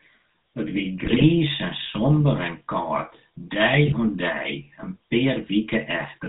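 GSM full-rate codec coloring runs through the whole speech clip, with plainly audible damage. The coder models the vocal tract as a filter and drives it with a sparse, regularly spaced pulse train that keeps only one excitation sample in three, so the voice takes on a buzzy, gravelly grain. Nothing above 4 kHz survives, leaving the sound dull and narrow. This character fits the 13 kbps full-rate coder.

GSM bit errors break in from 1.04 to 1.25 s and again from 3.86 to 3.98 s, just after "en kâld dei". Corrupted bits reached the decoder, scrambling the filter, pitch and gain values it uses to rebuild each frame. The spectrum warps and the level jumps, so the voice turns into squawks, pops and a gargling churn. The first burst is longer and sounds like about ten damaged frames at an error rate near 3.4 percent. The second sounds like about six frames at roughly 2.3 percent.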